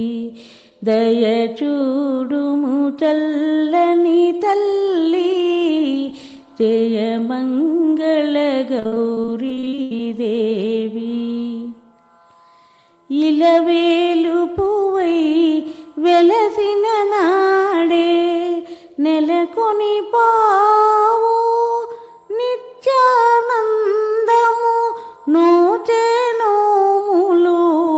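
From 8.79 to 9.99 s there is repeated packet loss with a robotic sound. Audio packets were lost or late again and again, and each gap, up to 80 ms, was patched by extending the preceding sound. About a third of that stretch is concealment, which gives a choppy stutter with pieces missing over the 8 kHz-limited call audio.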